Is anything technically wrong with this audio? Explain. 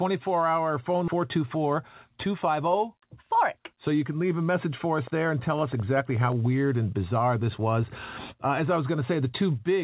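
Yes, there are two faults. At 1.08 s, just after "hour phone", there is a skip ahead: about 0.7 s of audio was dropped while later audio was already queued, so playback jumps forward with no gap or fill. Unlike a dropout, there is no silence, just an abrupt splice where material is missing.

From 5.07 to 6.33 s, between "a message for us" and "weird and bizarre this", a train of clicks runs at about 10.4 per second with uneven spacing, around fifteen pulses at roughly the level of the speech. The likely cause is interference or a faulty connection or power supply. The similar, repeated pulse shape and the way the clicks persist over the sound set them apart from one-off codec glitches.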